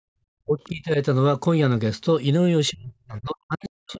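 From the start to 0.17 s the room background is held down by the echo canceller: while the loudspeaker plays, the canceller gates the microphone, and the ambient noise falls by up to about 40 dB before returning. The effect is a brief dead silence at the head of the clip rather than a natural fade. On a spectrogram the noise floor is an almost empty band; the waveform is a flat line that thickens once the gate releases.

Between 0.45 and 0.98 s the speech dips by roughly 20 dB, most likely speech suppressed in double talk: with both ends active, the canceller cannot tell the local talker from the echo and pulls everything down. The speech sounds pushed back. From 2.7 s to the end the same suppression returns much harder, around 40 dB at its deepest. On a spectrogram the harmonics thin or vanish in patches, below the 8 kHz ceiling of the call's microphone processing. The waveform envelope collapses.

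At 3.88 to 3.94 s a faint scrap of a second voice comes through, around 30 dB below the talker. This is the other side's voice leaking through, likely residual loudspeaker echo the canceller left in the microphone signal. On a spectrogram it shows as a short, weak smear of harmonics inside the suppressed region, and in the waveform only as a tiny blip.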